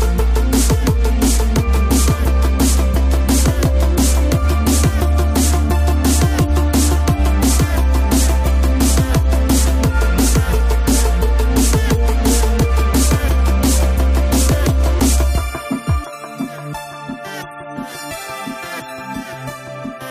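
Nothing is technically wrong with this clip.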